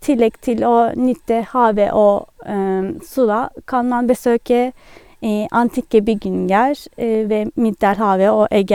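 No technical faults can be heard anywhere in the recording, and the speech signal stays continuous and stable throughout.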